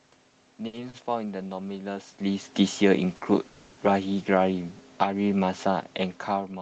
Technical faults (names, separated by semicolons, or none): short stall from a late packet; automatic gain falling; call audio freeze